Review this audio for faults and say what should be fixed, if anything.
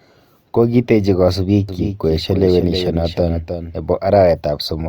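From 1.69 s to 3.75 s the speech is doubled: a second, full-band copy trails roughly 300 ms behind, about 10 dB quieter, and it switches on and off abruptly at those edges. The likely cause is the same signal being captured again through a slower path or an edit leaving two offset copies. Unlike room reverb or an acoustic echo, the copy has no decay tail and no room colour. To prevent it, route each source through a single capture path and check edits for overlapping duplicate regions.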